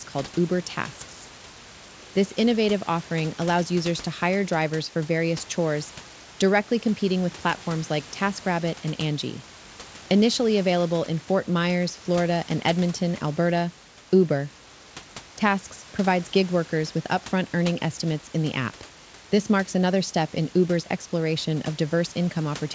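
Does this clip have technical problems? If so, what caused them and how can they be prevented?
No, the speech comes through a G.722 call path at 64 kbps that carries nothing above 8 kHz, with the room's own background noise sitting about 18 dB below the speech.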